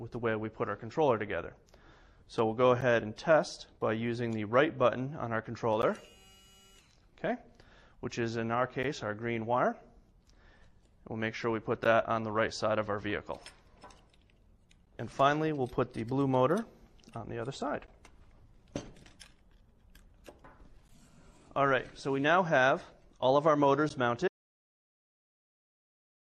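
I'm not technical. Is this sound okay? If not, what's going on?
No, there are two problems. First, a gap between chunks: the sound seems to arrive in three-second pieces, and a tiny 12 ms hole of silence sits at each join, at 2.81, 5.82, 8.83, 11.84, 14.86, 17.87, 20.88 and 23.89 s. Nothing is missing, but each gap leaves a sharp little break.

Second, an audio dropout to silence: at 24.28 s the sound cuts out completely and stays dead silent to the end, with no background hum at all. Whatever came after that point is gone, likely because the input was lost.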